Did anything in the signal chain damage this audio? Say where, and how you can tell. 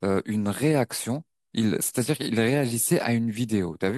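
No, no stage of the chain audibly damaged this recording.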